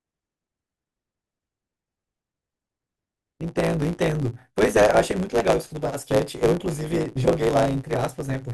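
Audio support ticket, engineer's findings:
Block size mismatch (truncated), present throughout the speech. Steady buzz at 109 Hz under the whole clip. Speech runs about 1.09 times fast, pitch roughly normal. Probable component: buffer handoff between two processing stages. Upstream stage writes blocks about 9% longer than the downstream stage reads. Each block's tail is discarded. Audio skips forward at every block boundary, giving the 109 Hz buzz and the shortened timing.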